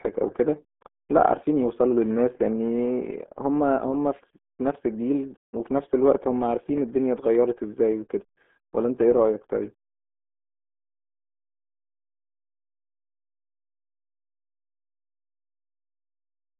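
From start to finish, the speech carries the RealAudio 14.4 codec sound, the old RealAudio 1 dial-up format. Nothing reaches above 3.7 kHz, and the usable band sits roughly between 200 Hz and 3.5 kHz, so sibilants and consonant edges are gone and the voice sounds boxed and muffled. Heavy low-rate coding, which fits an 8 kbit/s stream, adds a gargly, watery smearing to every syllable.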